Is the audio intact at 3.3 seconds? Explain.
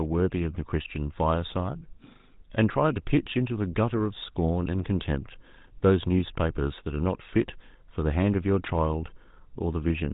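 No. At 3.3 seconds, as across the whole clip, the speech carries GSM full-rate codec damage, consistent with a 13 kbps full-rate coder. It rebuilds the voice from a vocal-tract model driven by sparse, evenly spaced pulses, leaving a plainly audible buzzy, gravelly roughness, with nothing above 3.8 kHz.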